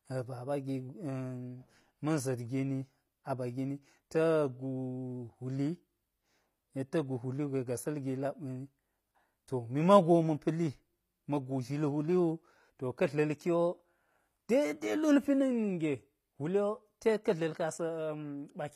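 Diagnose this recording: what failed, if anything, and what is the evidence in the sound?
HE-AAC compression runs through the whole recording, from start to finish, at the codec stage. The upper spectrum of the speech sounds synthetic. Sibilants come out gritty and metallic, and the brightness above the crossover doesn't sit naturally on the voice beneath it. The likely cause is spectral band replication: the encoder keeps only the lower band and rebuilds the treble by copying it upward under a coarse envelope, so the harmonics no longer align. The damage is plainly audible, which fits HE-AAC v2 at a low bitrate of around 24 kbps.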